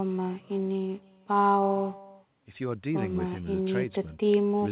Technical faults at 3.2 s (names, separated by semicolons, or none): echo with no canceller